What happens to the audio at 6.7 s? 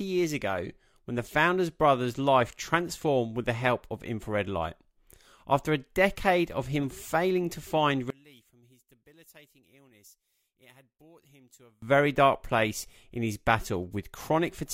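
Nothing goes wrong at 6.7 s; the audio at that moment is intact, with no dropout, click, distortion or other fault to be heard.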